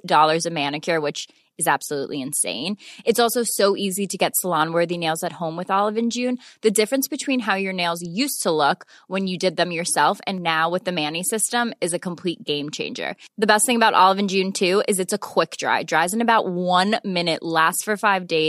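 No audible technical faults here.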